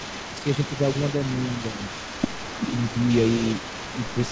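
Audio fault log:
throughout, echo leak: one side's echo canceller likely left part of its loudspeaker playback in the microphone signal and sent it back, so a delayed copy of the speech trails it by 312 ms, roughly 15 dB quieter, audible within the call band that ends at 8 kHz.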